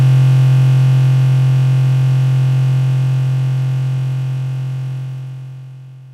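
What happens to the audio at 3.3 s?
Nothing goes wrong at 3.3 s; the audio plays through that moment intact, with no dropout, click or other fault.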